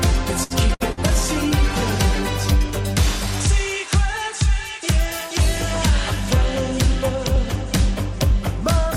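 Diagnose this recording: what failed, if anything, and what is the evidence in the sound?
Short stall from a late packet, 0.43 to 0.53 s. This is a network fault. A packet arrived late, the jitter buffer ran dry, and the receiver held the last sound for about 68 ms before resuming where it stopped. Nothing is lost, but playback now runs about 68 ms later.

Burst of packet loss at 0.74 to 0.83 s and again at 0.92 to 1.00 s. These are also network faults. Each time, about 60 ms of audio never arrived. The receiver stretched the last sound and faded it for 50 to 60 ms, then jumped ahead, leaving a gap in the sound.

Call bitrate drop, 0.86 to 2.65 s. The network bandwidth estimate fell, so the codec was cut from 128 to 22 kbps and stayed near the bottom for about 1.7 s. The audio sounds rough and muffled, with lost highs, until the bitrate recovers.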